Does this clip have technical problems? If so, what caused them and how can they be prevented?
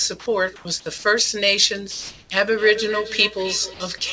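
Yes. There are three kinds of fault.

Comfort noise in place of the background: discontinuous transmission likely paused sending during quiet gaps, so the receiver synthesised noise. From 0.56 to 0.65 s and from 1.91 to 2.30 s, the real background becomes flat, featureless hiss, about 4 dB and about 2 dB quieter respectively. Raising the voice detector's hangover or disabling discontinuous transmission prevents this.

Sound dropped by the voice detector: the detector likely misjudged part of the speech as background and stopped transmission. From 0.98 to 1.04 s, 60 ms of speech is lost and replaced by steady comfort noise before the speech resumes. Using a less aggressive detector setting keeps such speech.

Feedback echo between two devices: a second device in the same room is replaying the call, and this microphone picks it up again. From 2.41 s to the end, the speech returns roughly every 300 ms, peaking about 12 dB below the speech and sounding thinner. 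Muting or leaving the call on the extra device prevents it.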